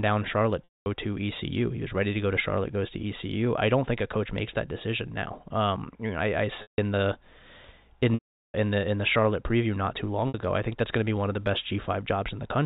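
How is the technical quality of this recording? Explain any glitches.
The telephone-band speech has four dropouts, caused by packet loss with pitch repetition, at 0.64 to 0.86 s, 6.62 to 6.78 s, 8.14 to 8.54 s and 10.28 to 10.34 s. Lost packets are bridged by repeating the last pitch period, which fades out within about 50 ms. The 60 ms gap sounds like a brief buzzy hold. The longer gaps of 160 to 400 ms fade to silence before the speech cross-fades back in.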